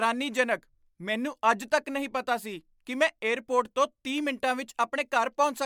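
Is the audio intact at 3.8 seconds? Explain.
Yes, at 3.8 seconds the speech runs on cleanly, with no dropout, click, distortion or other fault to be heard at that moment.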